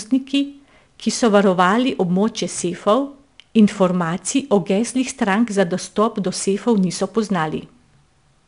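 From start to finish, the speech carries 4-bit ADPCM compression. Each sample is stored as a coarse 4-bit step away from a predicted value, and the step size adapts as it goes. The resulting error is a gritty hiss that rides on every loud sound and rises and falls with it. Sharp attacks break up where the step cannot grow fast enough. Nothing is heard above 10.6 kHz, which fits a sample rate near 22 kHz and a bitrate around 89 kbps.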